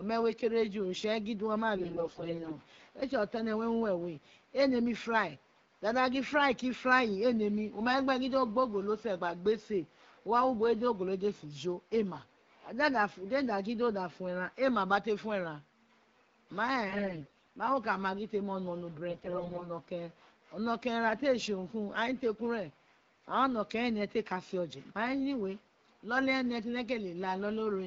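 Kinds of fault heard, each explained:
AMR bit errors: The less protected bits in the AMR frames got flipped on a weak link, but the check on the important bits still passed, so the decoder used them anyway. The excitation pulses land in the wrong places and the fine pitch, gain and spectral values drift. You hear it at 1.75 to 2.57 s, 16.88 to 17.52 s and 19.10 to 19.71 s, where the speech keeps its rough pitch and level but goes hoarse, scratchy and gargly. The first and last bursts sound heavier, against the otherwise clean wideband coding.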